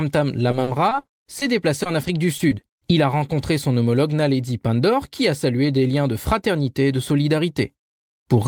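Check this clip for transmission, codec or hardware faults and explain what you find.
Yes, there is one transmission fault, heard twice: repeated packet loss (robotic sound), from 0.51 to 1.43 s and from 1.83 to 2.83 s. Short holes of up to 40 ms, then 20 ms, are patched by extending the preceding sound. This makes the speech choppy across about a fifth, then a seventh, of each stretch. Unlike a single dropout, the holes keep recurring, and they are filled rather than left silent.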